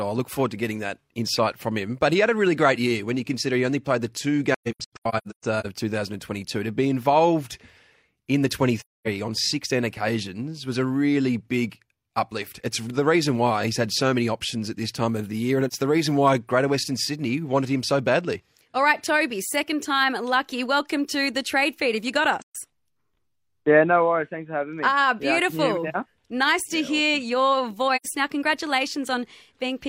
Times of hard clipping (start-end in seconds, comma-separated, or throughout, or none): none